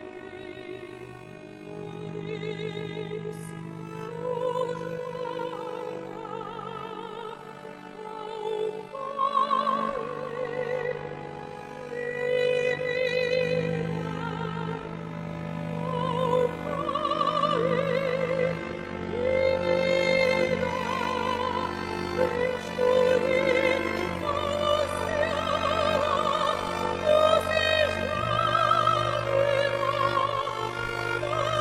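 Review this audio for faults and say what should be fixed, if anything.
Overlap-add ripple runs through the whole thing. The level pumps by about 11 dB at around 50 Hz, so you get a rough, robotic flutter. The framed audio was stitched back together with windows whose overlap doesn't sum to a steady gain. To fix it, pair the window shape and hop size so they meet the constant-overlap-add condition, or divide out the summed window afterwards.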